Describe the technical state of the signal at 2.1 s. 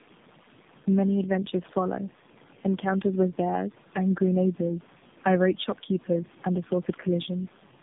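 At 2.1 s the speech shows tandem speech coding, present throughout the clip rather than only at this moment. The sound points to three low-rate speech codecs in a row, likely AMR-NB and G.729-type coders joined by plain telephone links, each re-encoding the previous one's already damaged output. Nothing is left above 3.8 kHz, so the speech is muffled, and the compounded coding errors give it a rough, warbly texture.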